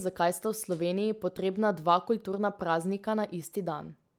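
A short bit of speech, and nothing technically wrong turns up in it anywhere.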